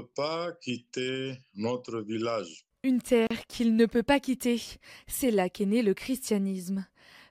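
A gap at a join of encoded pieces opens in this speech clip from 3.27 to 3.31 s, a silence of about 35 ms with smeared edges, just before "qu'il ne peut pas". Roughly 4-second pieces were encoded separately and butted together untrimmed, so one piece's padded final frame and the next one's encoder start-up delay both remain as dead air.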